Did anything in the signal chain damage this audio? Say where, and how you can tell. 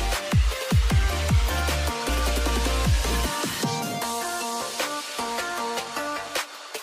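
No, nothing in the signal chain damaged this audio.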